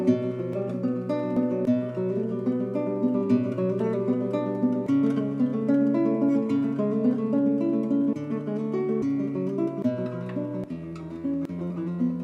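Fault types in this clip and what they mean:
Dropped buffer (overrun): At 0.53 s and again at 1.37 s the sound jumps forward, losing something like 70 ms the first time and a short 20 ms or so the second. The cause is likely the program falling behind so the hardware overwrote audio before it was read. The missing piece is simply spliced out with no gap, which separates it from an underrun, where silence or a stutter is inserted instead.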